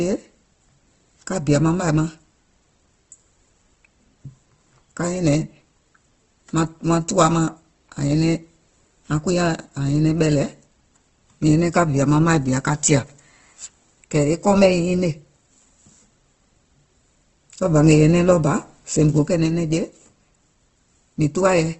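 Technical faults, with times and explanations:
Throughout, Opus compression: the whole clip has a grainy, rough texture, and nothing reaches above about 8.1 kHz, so the top end is simply gone rather than swirly. That pattern is most likely Opus running in its music-style CELT mode, squeezed to a low rate around 16 kbps. With so few bits, the encoder keeps each band's overall energy but fills in detail with folded or noisy content, which is what roughens the speech.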